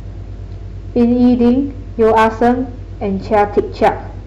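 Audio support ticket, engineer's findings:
Hard clipping, gain stage overdriven by about 4, 5 and 7 dB at 0.99–1.51 s, 2.01–2.52 s and 3.33–3.89 s. Speech peaks cut flat, giving distortion that worsens with each burst.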